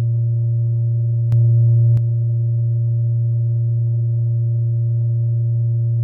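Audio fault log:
1.32–1.97 s, sudden gain jump: the music steps up by about 5 dB at 1.32 s with no fade-in, holds at that raised level for roughly two-thirds of a second, then drops straight back at 1.97 s. The background noise rises and falls in step with the music, so the whole signal was scaled at once. The likely cause is a digital gain setting applied instantly, from one sample to the next, rather than ramped smoothly.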